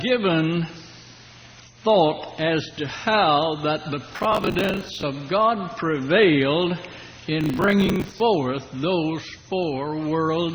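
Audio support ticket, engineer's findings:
Processor overload crackle, 4.13 to 5.03 s. Audio processing missing its deadlines in a sustained run; grit suggests buffers of about 10 ms. Each missed buffer is filled with stale audio, and the hard splice edges stack into gritty tearing over the sound.

Processor overload crackle, 7.41 to 8.20 s. Same mechanism, slightly shorter overload. Dozens of late buffers repeat old audio. Crackle stops once the load drops.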